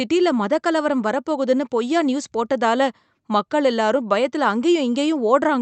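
No technical faults are audible anywhere in the speech.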